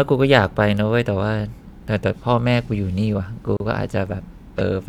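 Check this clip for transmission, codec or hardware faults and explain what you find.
One fault is present. At 3.57 to 3.60 s, a gap at a join of encoded pieces cuts the speech. Separately encoded segments kept their encoder padding. The result is a 33 ms silence with smeared edges.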